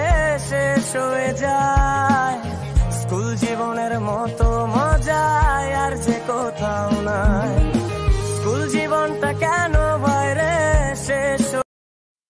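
Nothing goes wrong anywhere in this audio, so there's nothing to point out here.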